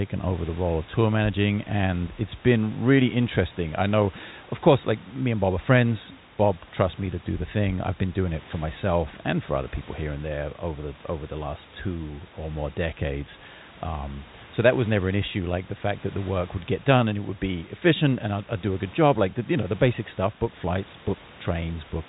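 No technical fault can be heard anywhere in the speech. Room noise sits about 21 dB below the voice, and the telephone coding leaves nothing above 3.8 kHz, which fits G.711 A-law at 64 kbps.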